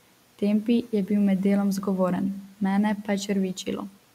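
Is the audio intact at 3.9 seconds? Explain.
No. From 3.88 to 3.98 s, speech is cut by the noise suppressor. It mistakes this brief speech for noise and pulls it down about 13 dB. It sounds swallowed.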